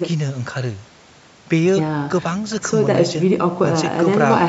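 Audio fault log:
No audible faults detected.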